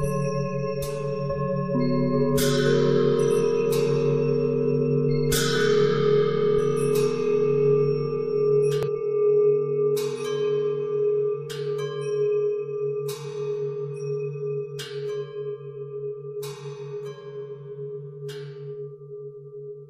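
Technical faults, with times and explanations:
3.39–3.41 s and 8.83–8.89 s, damaged data in a compressed stream: part of the compressed stream arrives corrupted, so the decoder cannot read the frames at those points, loses its lock on the frame structure and has to hunt for the next valid frame header before output resumes. Each spot is a short glitch that breaks the sound: about 20 ms at the first and nearly 60 ms at the second.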